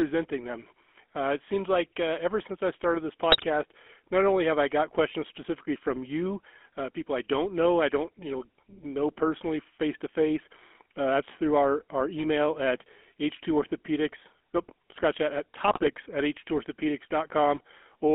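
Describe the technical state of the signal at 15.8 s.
At 15.8 s the signal is inside a burst of GSM bit errors running from 15.68 to 15.94 s, just after "nope scratch that at". Corrupted filter, pitch and gain parameters distort the spectrum and level frame by frame, so the audio breaks into squawks, pops and gargling for about a quarter-second.

Underneath, the GSM full-rate codec applies throughout. Its pulse-excited vocal-tract model, consistent with the 13 kbps full-rate coder, leaves a plainly audible buzzy, gravelly roughness, and the line band is confined to roughly 250 Hz to 3.4 kHz.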